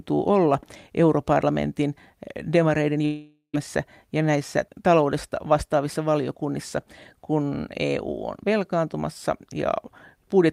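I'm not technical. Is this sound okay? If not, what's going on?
No. From 3.05 to 3.55 s the speech stops. What's left fades into a buzzy hiss and then a moment of silence. That is a long network dropout: about half a second of audio likely never arrived, so that stretch of speech is lost.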